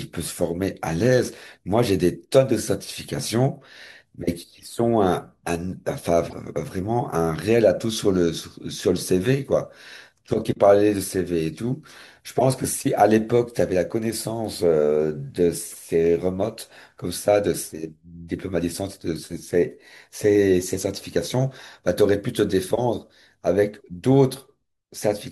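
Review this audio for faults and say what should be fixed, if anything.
Short chirps and blips cut through the speech at 3.23–3.25, 6.28–6.33, 12.38–12.45, 15.72–15.76 and 22.75–22.79 s, loudest near 12.4 s. These are corrupt frames decoded: flipped bits in one to a few compressed frames made the decoder place energy at wrong frequencies. Adding error detection, such as checksums, and concealing damaged frames instead of decoding them would prevent this.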